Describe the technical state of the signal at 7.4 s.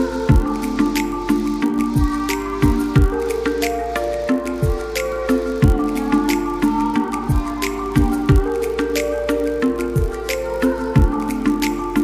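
At 7.4 s, as throughout the clip, a filter restarted on every block resets its state each block, leaving a small transient at the start of each one. The result is a 50 Hz buzz, pointing to blocks of about 20 ms. Unlike steady mains hum, it rises and falls with the signal's level.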